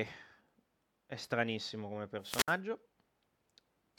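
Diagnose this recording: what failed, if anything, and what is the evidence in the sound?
Hiss swells at 2.20 s into a 63 ms near-silent hole, clearing by 2.58 s: wireless microphone squelch dropout, fading radio link tripping the receiver's mute.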